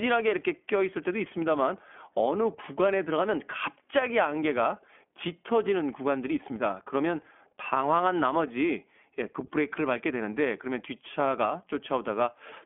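Throughout the speech, the iLBC codec confines the sound to a 250 to 3400 Hz telephone band, with nothing above 3.6 kHz. Its frame-by-frame excitation coding adds a plainly rough, synthetic edge, which fits a 15.2 kbps mode. A plain low-pass filter would stay smooth.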